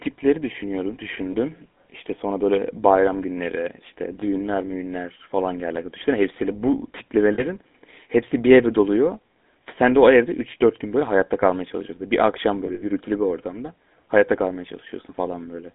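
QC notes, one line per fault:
throughout, GSM full-rate codec: the audio is confined to roughly 200 Hz to 3.5 kHz and carries a plainly audible buzzy, gravelly roughness. The vocal tract is modelled and driven by a decimated pulse excitation, which fits the 13 kbps full-rate coder.
1.32–1.35 s, 4.20–4.23 s (after "böyle bayram günleri işte"), 7.34–7.44 s (after "hepsiyle bu"), 12.66–12.83 s (before "bir ortamda hayatta kalmaya"), lost GSM frames: the decoder repeats the last good frame, so each dropout becomes a short metallic ring. The first two last about 20 ms, the third about 40 ms, and the last about 100 ms spread over 160 ms, with its longest run around 70 ms.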